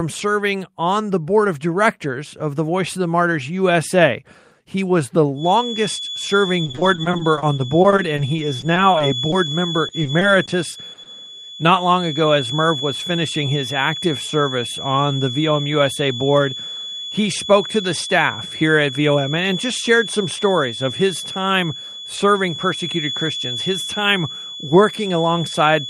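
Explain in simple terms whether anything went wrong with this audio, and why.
Right after "was the", at about 5.33 s, a thin whistle near 3.4 kHz starts behind the speech and stays to the end, quieter than the talking. This is a feedback whistle, likely caused by a loudspeaker's sound leaking back into the microphone and circling round at one pitch.

From 6.65 to 9.34 s, and again from 9.88 to 11.07 s, the speech turns choppy and robotic, with tiny bits missing. That is repeated packet loss: pieces of audio, none longer than 30 ms, failed to arrive, and each hole was patched by stretching the sound just before it.

Between 18.61 and 19.18 s the speech briefly sounds hurried, running about 8% fast at normal pitch. This is a jitter buffer speed-up. Too much audio had piled up waiting, so the receiver trimmed out tiny slices, roughly a twentieth of a second in all, to catch up.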